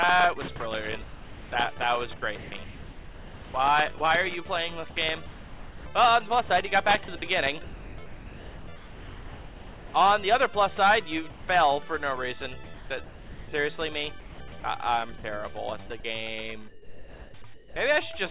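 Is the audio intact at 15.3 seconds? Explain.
No. From 12.64 to 17.76 s the sound is chopped by the voice detector, likely the sender's detector toggling transmission. About 1.9 s is replaced by comfort noise, so the audio stutters. A spectrogram shows flat, smooth noise blocks alternating with real content, and the waveform shows low, even gaps. Everything sits below 4 kHz.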